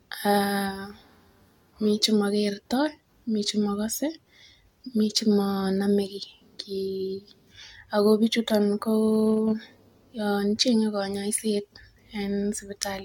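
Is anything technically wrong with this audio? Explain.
Yes. Generation loss runs throughout the speech: it sounds likely to have been through an AAC-LC encoder around seven times, each pass requantising on a shifted frame grid so the damage stacks. The result is swirly, hollow and smeared, with blurred attacks, nothing above 17 kHz, and a degree of wear consistent with repeated encoding at around 96 kbit/s.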